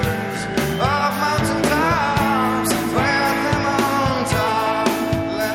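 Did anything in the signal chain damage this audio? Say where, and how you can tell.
No, the signal chain shows no damage at any stage, with nothing in the audio pointing to a problem in the wiring, conversion, processing, transmission or playback path.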